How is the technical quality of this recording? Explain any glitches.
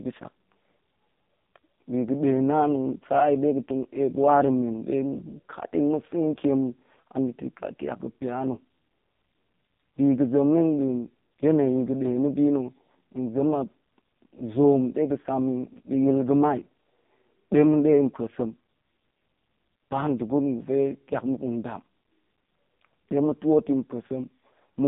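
Technical quality is poor, owing to one fault present for the whole recording: the speech has passed through the AMR narrowband mobile codec at a heavy level of damage. The line band runs from about 150 Hz to 3.7 kHz, and nothing survives above 3.8 kHz, so sibilance and air are gone. The codec rebuilds the voice from a vocal-tract model excited by a few pulses every 5 ms, and with so few bits the result is buzzy and synthetic. That degree of roughness fits one of the lowest AMR-NB modes, around 5 kbps.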